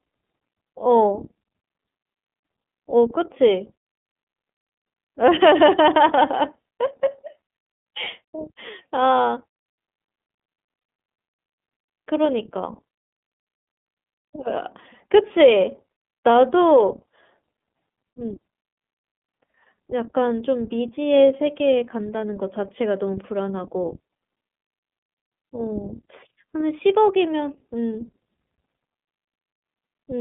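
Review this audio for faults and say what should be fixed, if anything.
Throughout the 30-second recording, the speech sounds thin, slightly rough and synthetic, confined to roughly 150 Hz to 3.5 kHz. This is the iLBC codec. It encodes each 30 ms frame independently and discards everything above about 3.5 kHz. The damage, which fits iLBC's 13.33 kbps mode, is plainly audible. Prevent it by carrying the call over a wideband codec instead.

From 10.79 to 10.82 s, a brief held, buzzy vowel replaces the speech, and then the voice returns clean immediately. These are lost iLBC frames. The decoder filled the 30 ms gap, which fits a single lost frame, by repeating the last pitch cycle mixed with noise. Prevent it with forward error correction or a better-provisioned network path.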